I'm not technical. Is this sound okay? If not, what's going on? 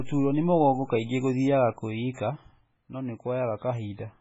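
No. MP3 compression damage runs through the whole clip: the speech sounds watery and swirly, with nothing above about 7.6 kHz. A heavily squeezed MP3 file is the likely cause, trimming the treble and letting faint details flicker in and out.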